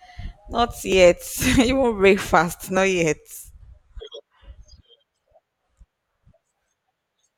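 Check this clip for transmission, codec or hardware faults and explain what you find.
One fault turns up in this speech: clock drift buffer slips. A short, regular click breaks into the signal about every 1.85 s, from 0.92 s to 6.46 s, so there are roughly four of them. The clicks are most likely caused by two devices running on separate clocks that disagree by a fraction of a percent. The buffer between them slowly overfills or runs dry until it drops or repeats a small block of a few tens of samples, leaving a discontinuity.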